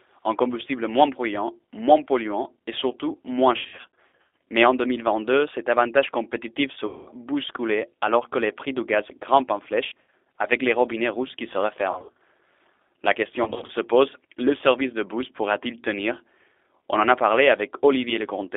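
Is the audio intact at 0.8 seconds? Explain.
No. At 0.8 seconds the speech carries G.729 codec damage, present across the whole clip. Each 10 ms frame is rebuilt from a vocal tract filter, pitch predictor and sparse pulses, which fits an 8 kbit/s codec. The band sits near 300 Hz to 3.6 kHz. Speech sounds plainly rough and synthetic.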